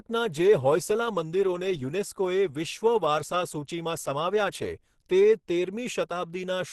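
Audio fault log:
throughout: Opus compression. The speech sounds muffled and hoarse, with grainy, rough texture in place of clean detail, and nothing above 12.1 kHz. That combination points to the codec's hybrid speech mode at a low rate, around 16 kbps, likely an Opus encode. Unlike MP3 damage, there is less swirling or watery warble from spectral holes. The bands stay filled with noise instead, so the damage is roughness rather than chirping.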